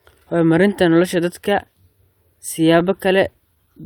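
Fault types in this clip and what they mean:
Repeated stalls (stutter), 3.21 to 3.82 s: packets arrived late, so the jitter buffer ran dry four times and the receiver stretched the last sound to fill about 37 ms in all, the longest gap 12 ms. Nothing is lost, but the speech drags and stutters briefly.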